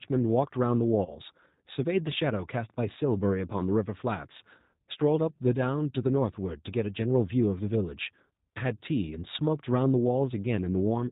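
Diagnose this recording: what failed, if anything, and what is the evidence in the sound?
The codec stage shows a G.729 codec at 8 kbit/s. Throughout, the speech sounds rough and slightly synthetic, with nothing above 4 kHz. On a spectrogram, energy stops sharply at 4 kHz. The decoder rebuilds each 10 ms frame from a filter, pitch predictor and sparse pulses.

VoIP packet loss concealed by the speech codec begins at the network stage at 1.05 s. The speech turns into a stretched, fading sound until about 1.20 s, which fits a single lost 20 ms packet. The decoder extrapolated its last pitch and filter, and recovery lagged. A spectrogram shows smeared harmonics and a waveform with decaying, repetitive cycles.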